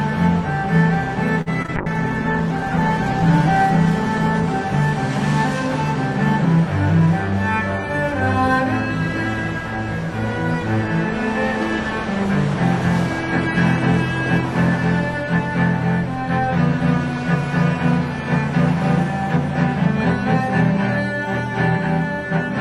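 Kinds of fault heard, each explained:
Short stall from a late packet: Around 1.41 s a packet turns up late, the jitter buffer runs dry, and the receiver stretches the last bit of sound for about 49 ms until it arrives. Nothing goes missing, but that moment hangs on a touch too long, and everything after it runs about 49 ms later.
Short concealed packet loss: Right after, at 1.62 s and again at 1.66 s, two back-to-back 20 ms chunks never make it. The decoder papers over them by carrying the previous sound forward, so you hear a brief smear or wobble running to about 1.70 s before it blends back into the real audio.
Call bitrate drop: From 1.77 s to about 6.16 s the bandwidth estimate collapses and the encoder gets squeezed from 128 kbps down to 13 kbps, sitting at the bottom for about 1.3 s. The sound goes rough and muffled, losing its top end, until the rate climbs back.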